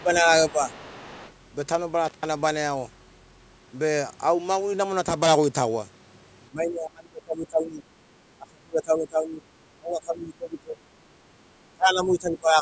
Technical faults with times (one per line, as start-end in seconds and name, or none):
0.00-0.70 speech suppressed in double talk
0.49-1.32 other side's voice leaking through
2.05-2.26 intermittent contact
6.50-7.83 speech suppressed in double talk
8.37-9.43 speech suppressed in double talk
9.78-10.89 speech suppressed in double talk
11.73-12.62 speech suppressed in double talk